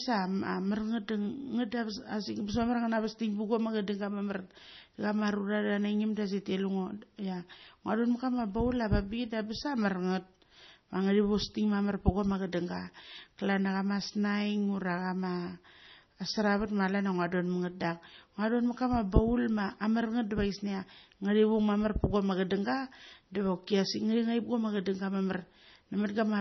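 Throughout, the speech sounds watery and swirly, with smeared consonants and nothing above 6 kHz. The likely cause is heavy MP3 compression at a bitrate near 24 kbps, where the encoder removes the treble and drops weak frequency lines that flicker between frames.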